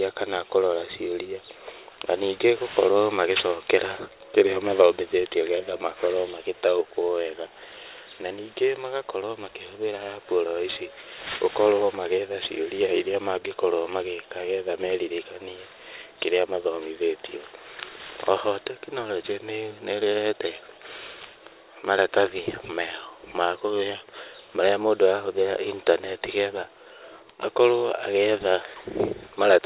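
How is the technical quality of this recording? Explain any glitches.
The recording has a clear fault: aliasing runs through the whole clip, from start to finish.

The sound points to a drop from a 44.1 kHz rate to about 8 kHz with no low-pass filter first. Everything above the 4 kHz fold point reflects back down to wrong, unrelated frequencies, sitting roughly 20 dB below the speech. Sibilants sound gritty and metallic. On a spectrogram, energy runs hard up to the 4 kHz edge, with mirrored streaks where high content has folded down.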